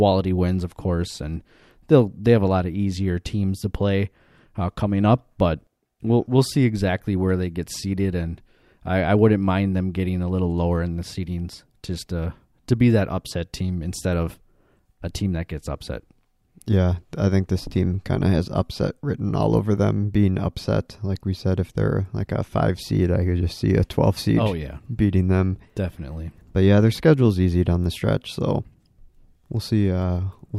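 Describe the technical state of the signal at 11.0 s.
At 11.0 s the speech signal is intact, with no audible fault at that moment.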